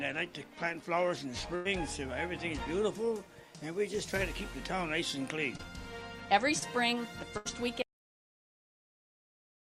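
At 1.55 to 1.67 s there's a burst of packet loss: about 100 ms of audio never arrived, so the receiver stretched the last sound for 96 ms, fading it, then jumped ahead. Around 5.57 to 5.61 s and 6.59 to 6.63 s you get short concealed packet loss, roughly 20 ms gone each time, patched with continued sound that comes across as a quick smear. Another burst at 7.37 to 7.47 s loses 80 ms, covered by a 77 ms fading fill. Then from 7.82 s to the end there's an audio dropout to silence, with no room tone, likely from the input being lost through a disconnect, failed link or stray mute.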